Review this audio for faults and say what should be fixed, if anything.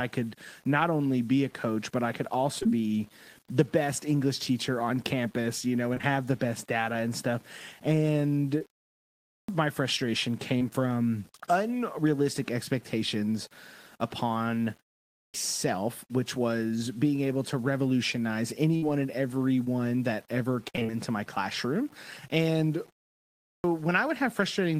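There's a grainy, gritty edge running under the whole speech track, worst on quiet trailing sounds, where the grain rises and falls with the level instead of sitting still like hiss. That's low bit depth without dither, likely from the audio being rounded down to something like 8 bits with no dither. The rounding error tracks the signal, so it sounds like distortion rather than noise, and it sits at roughly 30 dB below the speech. Keep the path at 16 bits or more, and add dither whenever you have to reduce word length.

Three stretches have repeated packet loss, which gives a choppy, robotic sound. The first is at 2.59 to 2.70 s, right after "coach but I could", where three short holes of up to 18 ms are each patched by repeating the previous sound. The second is at 5.94 to 6.13 s, again three gaps of up to 16 ms. The third is the longest, from 18.77 to 20.97 s, with seven gaps of up to 55 ms spread across that run. 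Each patch carries the last bit of audio forward, and the next hole arrives before the sound recovers, so you get that choppy stutter. A deeper jitter buffer, or forward error correction on the link, would stop this.

There are also three clipped starts after pauses, where the output device seems to drop into sleep during silence and misses the onset when it wakes. At 9.21 s, after a pause of about 0.6 s, roughly 270 ms is swallowed just before "my frustration". At 15.06 s, right after "from unrealistic expectations upon" and a 0.33 s gap, about 280 ms is lost. At 23.40 s, after a 0.55 s pause, about 240 ms is lost. In each case the speech jumps in abruptly, with its opening cut off. Keep the device awake through pauses, for example by feeding it a low-level signal or disabling its power-saving idle mode.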